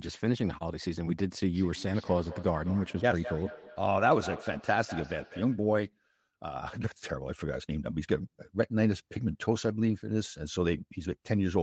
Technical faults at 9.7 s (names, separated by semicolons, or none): none